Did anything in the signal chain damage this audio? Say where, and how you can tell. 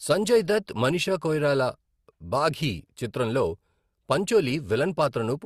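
Yes, at the codec stage: layered coding smear throughout. This is likely transcoding between lossy codecs, with Opus-like artefacts re-encoded by AAC-LC.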